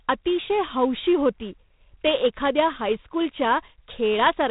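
It's a speech clip that's been through G.726 ADPCM the whole way: nothing above 3.8 kHz, plus a harsh, rasping hiss riding the speech level, which points to the 24 kbit/s mode.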